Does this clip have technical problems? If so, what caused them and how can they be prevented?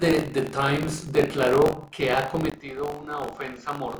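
Yes. Buffer tearing runs through the whole clip. The writing program and the playback hardware have drifted out of step, so a small slice of each buffer repeats audio from about 40 ms earlier. This produces a robotic buzz at 46.9 Hz under the speech, which fits a 1024-sample buffer. To prevent it, keep writer and reader synchronised with adequate headroom, and re-align the buffer pointers when they drift.

At 2.5 s, just after "declaró que ha", the input likely switched to a poorer device. After a 20 ms gap, the speech turns duller and narrower in band, drops about 10 dB in level, and gains a faint new noise floor. To prevent it, lock the recording to a fixed input device and disable automatic device or headset-profile switching while recording.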